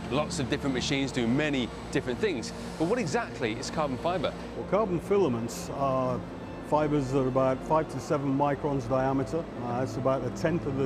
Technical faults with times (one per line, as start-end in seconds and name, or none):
none